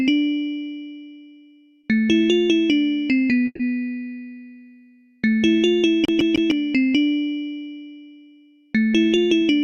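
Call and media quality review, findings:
Call audio freeze, 3.45 to 3.62 s: the last sound is held as a fading buzz for about 140 ms, then about 20 ms of silence, and the audio resumes where it stopped with nothing lost and 140 ms added delay. The likely cause is delayed packets draining the jitter buffer.

CD stuck on one turn, 6.05 to 6.51 s: the same 154 ms segment plays 3 times with a brief mute at each jump. This is the fast, even stutter of a laser thrown back one track by a scratch.

Jitter buffer speed-up, 9.06 to 9.63 s: the audio runs at 112% speed with unchanged pitch and sounds hurried. Around 70 ms is trimmed in short pitch-period cuts as the receiver drains excess buffered audio to reduce delay.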